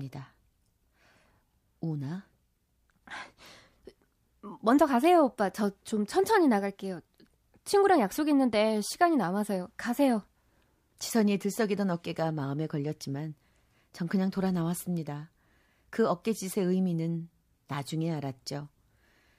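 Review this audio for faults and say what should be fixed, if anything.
Pre-echo at 16.23 s: hiss about 13 dB up smears 17 ms ahead of an attack, which fits 26 ms transform blocks with no short-block switching, and shows as broadband haze before the onset on a spectrogram. Enabling short-block switching on transients would prevent it.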